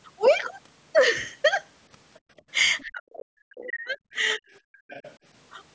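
Background gated by the echo canceller at 2.26 to 2.37 s: the room sound drops by about 29 dB as the canceller clamps the microphone while the loudspeaker plays, then recovers.

The other side's voice leaking through at 2.78 to 2.85 s is a faint scrap roughly 30 dB below the speech, likely loudspeaker echo the canceller failed to remove.

Speech suppressed in double talk from 2.84 to 3.98 s: the talker's voice sinks by as much as 40 dB across about a second, likely because the canceller could not separate it from the simultaneous far-end echo.

Leakage returns at 3.58 to 3.68 s, again around 30 dB down.

A second, milder double-talk dip follows at 4.14 to 4.42 s, cutting the voice by roughly 15 dB.

Another faint leak at 4.51 to 4.59 s sits around 40 dB below the speech.

The background is gated again at 4.7 to 4.89 s, falling about 40 dB.

A final, louder stretch of leakage comes at 4.89 to 5.15 s, around 25 dB below the speech.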